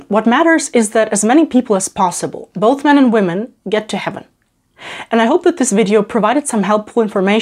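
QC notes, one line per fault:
Nothing stood out on listening to this audio.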